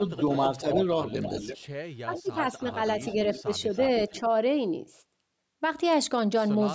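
A far-end echo canceller, likely on a loudspeaker phone, lets part of the returned signal through, producing echo leak: a faint copy of the speech trailing by about 325 ms, roughly 15 dB down at 0.08–0.37 s, louder (around 10 dB down) at 0.73–1.68 s, then quieter again at 2.14–3.42 s and 3.73–4.2 s.

Where both sides overlap, the canceller likely mistakes the talker for echo and turns it down, giving speech suppressed in double talk: a slight dip of a few decibels at 0.61–0.77 s, then deeper cuts of around 15 dB at 2.04–2.3 s and 3.15–3.48 s.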